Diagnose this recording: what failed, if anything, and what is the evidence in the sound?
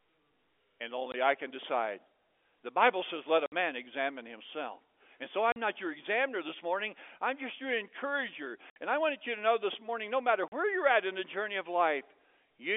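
Hard-edged holes at 1.12, 3.46, 5.52, 8.70 and 10.48 s, 20 to 60 ms long: network packet loss filled with silence, fitting 20 ms packets.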